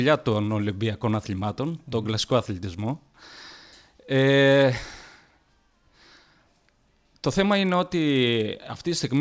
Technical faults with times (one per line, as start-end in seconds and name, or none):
0.00-9.21 resampler restarted on every block